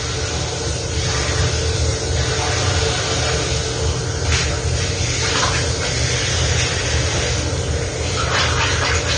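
From start to end the audio is dull, with nothing above 9 kHz and a smeared, swirling texture, most likely AAC compression at a low bitrate, one that fits roughly 32 kbps. That swirl of coarse quantisation, not just the missing top end, sets it apart from a simple low-pass filter.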